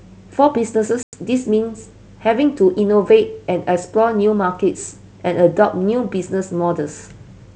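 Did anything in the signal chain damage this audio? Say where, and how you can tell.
Yes, at the network stage: packet loss on an ADPCM call. From 1.03 s to 1.18 s the speech drops into a hard-edged silent hole, about 100 ms of missing audio, around ten packets' worth. When the sound resumes it is briefly off before settling, because the decoder's adaptive predictor and step size lost track of the sender's state during the gap. The G.722 wideband coding at 64 kbit/s is not the source of this damage.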